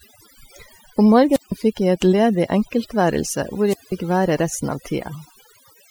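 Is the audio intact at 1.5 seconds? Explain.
No. Around 1.30 s static swells, then the speech drops to near silence for about 157 ms before returning by 1.52 s. This is a wireless microphone squelch dropout: the FM radio signal faded until the receiver's squelch muted the output entirely.

The speech there also sits against a lowered background with twinkling specks, the mark of overdone noise removal. The noise reduction was set so strong that it pushes down any frequency band close to its noise estimate, taking quieter parts of the speech along with it.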